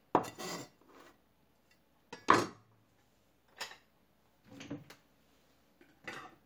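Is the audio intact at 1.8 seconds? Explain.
Yes, at 1.8 seconds the audio plays through intact, with no dropout, click or distortion at that moment.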